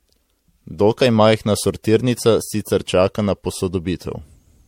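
Generation loss runs through the whole speech clip: it sounds swirly, smeared and hollow, with blurred attacks and nothing above 16.4 kHz, likely from about four successive lossy encodes, which fits MP3 at 64 kbit/s.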